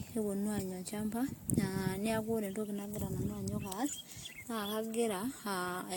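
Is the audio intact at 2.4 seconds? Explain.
No. At 2.4 seconds, as throughout the clip, the speech sounds swirly, hollow and smeared, with blurred attacks and nothing above 19.2 kHz. This is likely generation loss: roughly seven successive AAC-LC encodes near 96 kbit/s, each requantising on a shifted frame grid so the damage accumulates.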